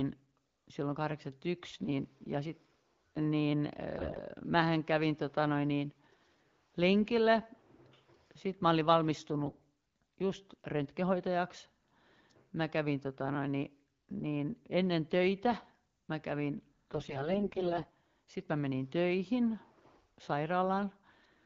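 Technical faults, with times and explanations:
3.97 to 4.18 s, 9.44 to 9.56 s and 16.93 to 17.94 s, AMR bit errors: The speech turns hoarse, scratchy and gargly, just before "mähän kävin tota noin", just after "mä olin" and after "ennen töitä mä kävin". Pitch and level roughly hold. The pattern points to a weak radio link flipping the less protected bits of each AMR frame, around one in ten to one in seven of them, while the checksum on the key bits still passed. The voice model's drive pulses then land wrongly, and the fine pitch, gain and spectral values drift. The underlying wideband coding sounds clean, which fits the 12.65 kbit/s mode.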